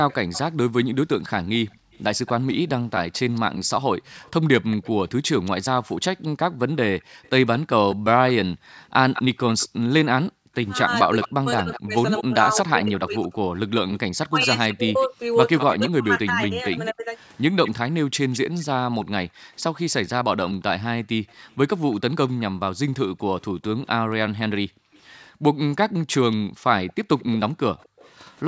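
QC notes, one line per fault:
0.09–28.11 s, echo leak: a delayed copy of the speech trails the original by 220 ms, roughly 15 dB down, and recurs across the whole clip. This sounds like the far end's loudspeaker output reaching its microphone and likely slipping past an echo canceller that did not fully remove it.
1.71–1.93 s, 7.0–10.54 s, 18.06–28.0 s, background gated by the echo canceller: room sound dips by as much as about 40 dB, totalling about 150 ms, about 1 s and about 2 s respectively. The canceller clamped the microphone while its loudspeaker played, then released it.
10.84–17.1 s, speech suppressed in double talk: the talker's level drops in pieces, at worst by roughly 30 dB, adding up to around 3 s. Both sides were speaking, and the canceller likely could not separate near speech from loudspeaker echo, so it attenuated both.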